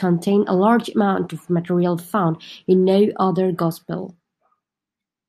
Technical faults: none

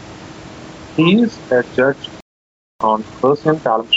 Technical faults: gain pumping; playback stall; time-compressed catch-up

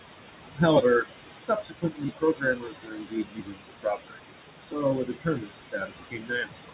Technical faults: noise suppressor artifacts; speech cut by the noise suppressor

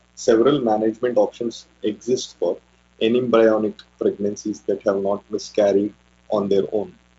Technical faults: mains buzz

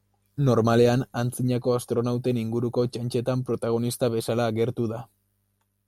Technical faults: none

